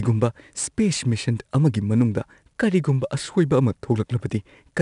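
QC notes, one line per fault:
Throughout, 4-bit ADPCM compression: each sample is stored as a small 4-bit step from a predicted value, with the step size adapting as the speech moves. The coding error is plainly audible as a gritty hiss that rises and falls with the speech level. Sharp attacks distort because the step cannot grow quickly enough to follow them. Nothing remains above 10.6 kHz, which fits a rate of roughly 89 kbps and dulls the top end.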